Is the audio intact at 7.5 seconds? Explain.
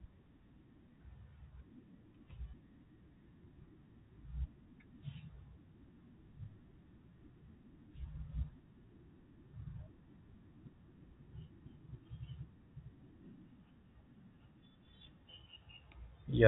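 Yes, the speech at 7.5 seconds comes through intact, carried by the ordinary G.711 telephone coding with its band limit at 3.8 kHz and nothing more.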